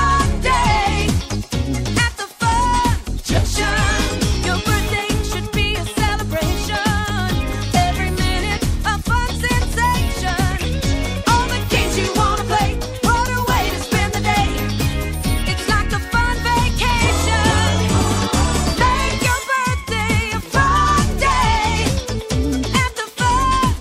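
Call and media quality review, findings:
Skip ahead at 3.37 s: playback jumps forward with no gap, roughly 0.4 s of audio gone and the two sides butted together. Looks like the jitter buffer overflowed and dumped queued audio, or it was lost in transit, with delay dropping about 400 ms.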